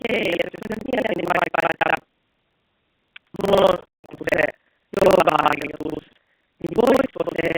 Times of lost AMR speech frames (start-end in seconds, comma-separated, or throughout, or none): 3.64-4.06, 5.94-6.05